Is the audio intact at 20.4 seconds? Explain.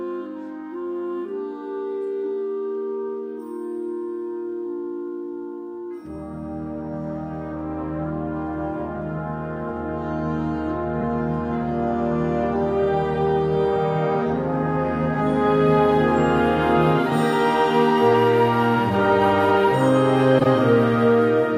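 No. From 20.38 to 20.47 s there is a corrupt frame decoded: a handful of consecutive compressed frames arrived with damaged bits, and the decoder played them anyway. Misread gains and spectral codes put energy where none belongs, giving a sharp, chirpy burst that peaks loudly, around -5 dBFS. Unlike a dropout or concealed packet loss, which leaves a gap or smeared repeat, this is sound that shouldn't be there at all.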